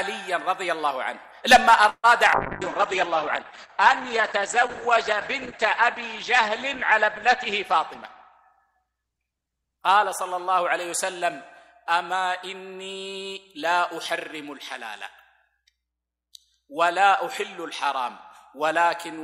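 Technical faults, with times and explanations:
1.89–2.06 s, call audio freeze: the sound stops moving forward for about 0.16 s. The last moment is stretched into a fading buzz for roughly 140 ms, then about 50 ms of silence, before the audio resumes exactly where it left off. Nothing is lost; a gap is inserted instead. This most likely comes from packets held up in transit, so the jitter buffer ran dry and the receiver filled the wait by continuing the final sound.
2.34–10.70 s, call bitrate drop: the encoder's rate falls from 128 kbps to about 9 kbps. It stays at the lowest point for about 3.7 s before climbing back. With so few bits the coding turns coarse and grainy, with a watery edge. The audio band also shrinks from 20 kHz to 8 kHz, so everything above that is gone and the sound becomes muffled and dull. This follows the call's bandwidth estimate collapsing and the encoder being told to spend far less.
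7.45–8.88 s, jitter buffer speed-up: the audio runs about 10% fast at unchanged pitch, sounding hurried for this stretch. The receiver's buffer held more audio than its target, so it trimmed short pitch-period slices over and over to pull the delay down. Roughly 150 ms is cut out in total. This overlaps the low-bitrate section, so the hurrying arrives on top of the already muffled, rough coding.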